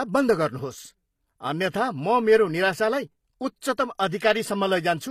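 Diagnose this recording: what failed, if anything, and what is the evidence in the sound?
Codec stage, throughout. Gritty, lispy s sounds; nothing above 14.9 kHz. Likely HE-AAC compression copying lower bands upward, fitting a low bitrate near 24 kbps.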